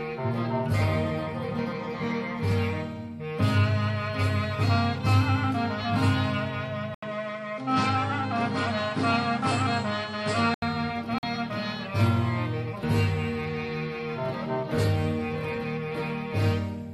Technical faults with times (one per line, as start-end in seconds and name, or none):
6.94-10.62 input switched to a poorer device
11.18-11.23 Bluetooth dropout